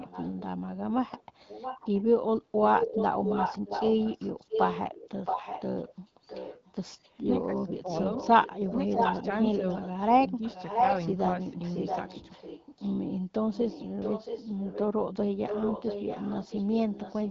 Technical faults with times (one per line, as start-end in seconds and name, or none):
0.00-0.42 echo leak
1.07-2.03 echo leak
2.59-10.96 echo leak
7.42-7.91 speech suppressed in double talk
8.92-9.27 speech suppressed in double talk
10.21-10.42 speech suppressed in double talk
11.66-12.93 echo leak
13.51-17.30 echo leak